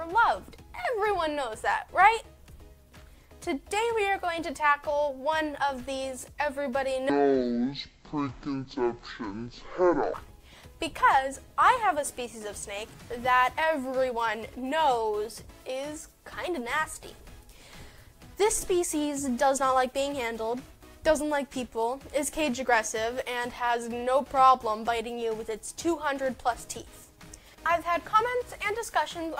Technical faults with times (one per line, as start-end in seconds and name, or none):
7.10-10.14 stereo read as mono